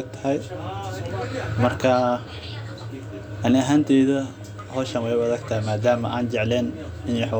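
Nothing in the recording stood out as a problem on listening.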